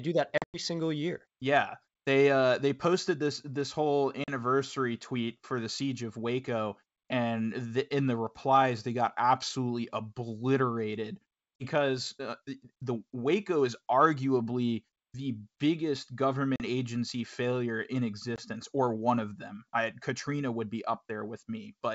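Packet loss on an ADPCM call breaks up this speech clip at 0.38, 4.24, 11.56, 16.56 and 18.36 s, heard as hard-edged silent holes. After each hole the decoder's adaptive predictor and step size no longer match the sender's, so the sound comes back with brief distortion before settling. The worst comes after "do that", where about 140 ms is missing, scattered over 160 ms with a longest gap of 100 ms, consistent with roughly seven lost packets. The others are shorter: 40 ms after "they got absolutely obliterated" before "uh the", 40 ms between "is arguably the biggest" and "agency failure in", 40 ms at 4.24 s, and 20 ms at 18.36 s. The G.722 wideband coding at 64 kbit/s carries the sound up to 7 kHz.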